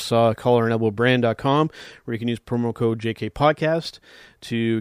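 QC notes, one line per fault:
No faults heard anywhere in the speech.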